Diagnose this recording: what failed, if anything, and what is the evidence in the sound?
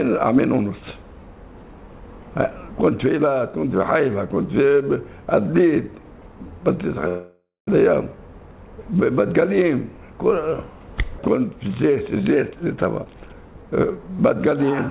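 Network stage: delayed packets likely emptied the jitter buffer. The call audio freeze from 7.08 to 7.69 s fades to silence, then resumes with nothing lost.

Buffer stage: the overfilled jitter buffer trimmed short pitch-period slices. This jitter buffer speed-up, from 12.35 to 14.64 s, runs at 118% with unchanged pitch and sounds hurried.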